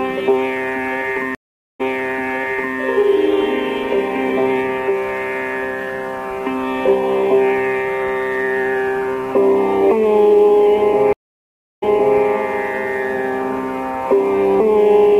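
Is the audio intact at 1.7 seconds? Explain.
No. At 1.7 s the clip is inside a stream reconnect spanning 1.35 to 2.77 s. The connection dropped, leaving about 0.45 s of flat, empty waveform. A fresh decoder then resumed nearly a second earlier, so already-heard material repeats visibly on the spectrogram.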